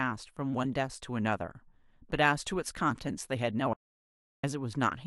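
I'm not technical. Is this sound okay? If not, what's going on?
No. The recording likely lost its audio input briefly, an audio dropout to silence, so from 3.73 to 4.44 s the speech cuts to total silence and that part is lost.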